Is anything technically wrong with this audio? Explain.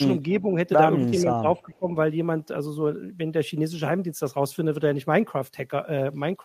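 Yes. From 0.34 to 0.41 s there is an echo leak: a faint delayed copy of the speech returns about 400 ms after the original, at roughly 30 dB below it. This is likely a loudspeaker on the far end whose echo canceller let part of its microphone pickup slip back into the call. On a spectrogram it shows as a weak, smeared repeat of earlier harmonic patterns. On a waveform it is a small ripple trailing the louder speech.

Speech suppressed in double talk follows at 0.41 to 0.57 s and again at 1.2 to 1.89 s. The first dip is shallow, about 5 dB, touching only around 70 ms. The second is deeper, about 15 dB, across roughly half a second, making the speech sound pushed back and patchy. The likely cause is the echo canceller mistaking overlapping talk for echo and attenuating everything. The waveform envelope sags in those spans, and the spectrogram shows fainter, gappy energy.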